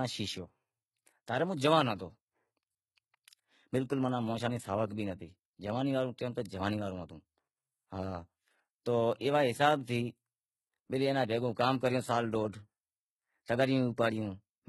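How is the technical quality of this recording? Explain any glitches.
The recording carries heavy low-bitrate compression damage throughout the speech. The likely cause is HE-AAC compression: only the lower spectrum is properly coded, and the treble is rebuilt by copying lower bands upward, which fits a bitrate near 16 kbps. That synthetic top end sits misaligned with the real harmonics, so s sounds come out gritty, metallic or lispy across the whole clip.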